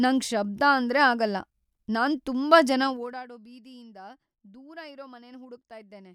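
From 2.82 to 3.26 s, just after "ಆಗಲ್ಲ ನಾನ್ ತುಂಬಾ ಜನ", zipper noise appears as the level drops about 20 dB in unsmoothed 2 dB steps, around thirty per second. Each step ticks audibly. The waveform envelope shows a staircase, and the spectrogram shows faint vertical broadband lines.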